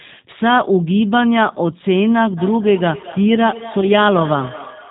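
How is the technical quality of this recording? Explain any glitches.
The recording has clear technical problems: plainly audible low-bitrate coding throughout, a device-to-device echo in the second half, and one brief dropout.

The G.729 codec colours the whole clip. Its output is band-limited and rough, consistent with an 8 kbit/s coder building speech from a vocal tract filter, a pitch predictor and sparse pulses. It sounds slightly synthetic. A spectrogram shows nothing above 4 kHz and a smeared, grainy harmonic structure.

Feedback echo between two devices runs from 2.36 s to the end. A second device in the room replays the call, and its sound is picked up again, beyond the reach of either echo canceller. Thinner, ringing copies return roughly every fifth of a second, peaking about 14 dB below the speech. The waveform shows repeating, decaying ghost envelopes.

VoIP packet loss concealed by the speech codec occurs between 3.81 and 3.87 s. 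The decoder filled the gap by extending its last pitch and filter settings and lowering the gain, which fits a single lost 10 ms frame. Recovery then took tens of milliseconds. It sounds like a short stretched smear that dips and then weakly returns. The spectrogram shows stretched, fading content at the gap.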